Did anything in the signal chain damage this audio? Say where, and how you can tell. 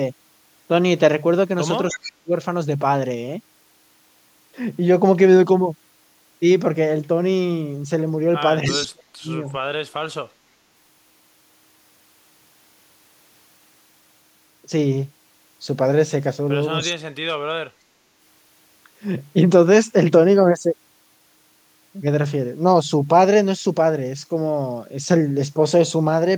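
Yes. Echo leak at 1.91, 8.66, 9.46 and 16.83 s: faint copies trail 308 ms behind, likely residual echo from call processing. On a spectrogram they appear as ghost harmonics.

Speech suppressed in double talk at 1.93–2.32, 8.68–9.28 and 16.85–17.22 s: the waveform envelope collapses by roughly 35 to 40 dB, likely the echo canceller ducking both talkers.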